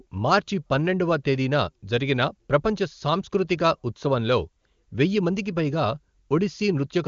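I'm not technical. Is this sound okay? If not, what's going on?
Yes, this one's fine: it's speech carried over an HD Voice phone connection, which naturally tops out around 7 kHz, so it has that slightly phone-like brightness, and there's nothing here to worry about.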